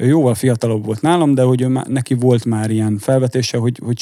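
A short speech recording with nothing technically wrong with it.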